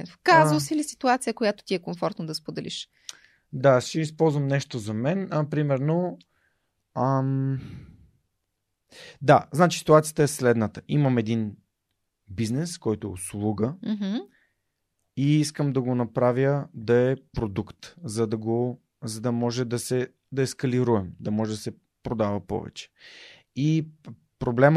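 No technical faults occur at any point in the recording, so there is nothing to describe in time order.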